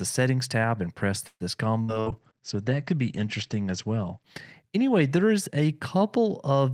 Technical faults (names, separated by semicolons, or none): call audio freeze; burst of packet loss; call bitrate drop